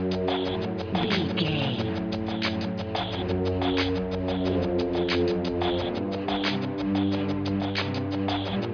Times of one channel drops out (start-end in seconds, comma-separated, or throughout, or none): none